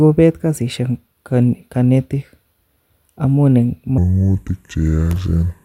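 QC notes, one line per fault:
3.98–5.65 s, section at the wrong speed: after "amun en" the speech drops to 0.684x speed and about seven semitones lower, likely from playback on a mismatched clock.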